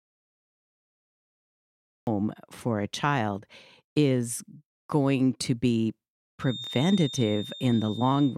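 A speech recording that begins in dead silence: from the very start until 2.07 s there is no sound at all, not even room tone, before the talker cuts in mid-flow. That is an audio dropout to silence, most likely a lost input while the recorder kept writing silence. From 6.38 s to the end, a thin, steady whistle near 3.6 kHz sits about 15 dB beneath the speech, swelling and fading slowly in level. This feedback whistle likely comes from a loudspeaker-to-microphone loop hovering just short of runaway.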